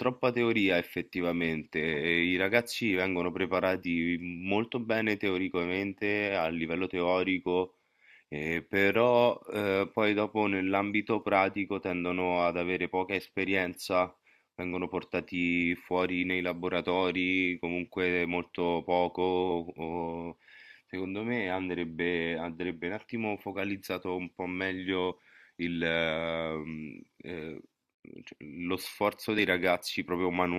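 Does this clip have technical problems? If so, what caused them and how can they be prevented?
Yes, there are two brief glitches in this speech, at about 25.11 s and 29.38 s, and both sound like damaged data in a compressed stream. A few bad bytes throw the decoder off its frames, so it blips while resyncing. Checksummed transfers and verified copies prevent it.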